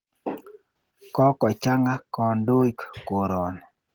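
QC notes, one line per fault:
throughout, Opus voice compression: hoarse, robotic speech from coarsely coded excitation, consistent with roughly 16 kbps; the spectrogram shows patchy, blocky energy from 8 kHz up to 20.3 kHz.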